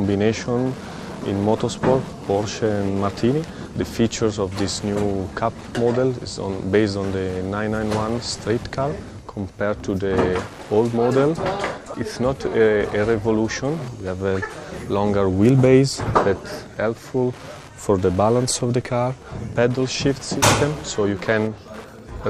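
From start to end, a steady ticking runs roughly 25 dB below the sound, repeating every 102.4 ms, almost ten times a second. This is Wi-Fi interference: a nearby Wi-Fi radio's beacons are rectified by the audio circuit, each one becoming a tick.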